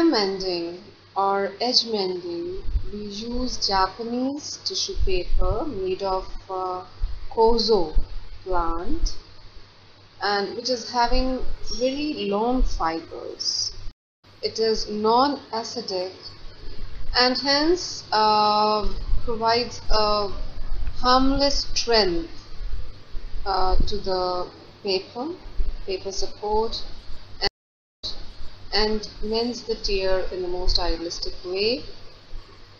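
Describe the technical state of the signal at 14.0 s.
At 14.0 s the signal sits inside a stream reconnect spanning 13.91 to 14.25 s. The connection dropped, leaving about 0.32 s of silence, and a fresh decoder restarted mid-stream, so the audio resumes roughly 0.3 s further on, skipping material rather than continuing seamlessly.

Underneath, the whole clip carries plainly audible codec damage: watery, swirling high end, dulled treble and smeared attacks. These point to likely MP3 compression, consistent with an encode at around 64 kbps where weak spectral lines drop in and out between frames.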